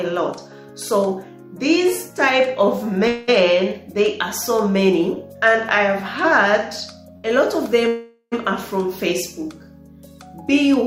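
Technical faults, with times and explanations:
3.07–3.30 s, call audio freeze: the last sound is drawn out as a fading buzz for about 0.2 s, likely packets held up and the jitter buffer running dry; nothing lost, just a pause.
7.17–7.26 s, short stall from a late packet: one sound hangs on about 66 ms with a slight buzz while a late packet catches up, then carries on unchanged.
7.88–8.34 s, call audio freeze: a longer hold of about 0.44 s, the buzz fading to a brief silence before the audio resumes where it left off.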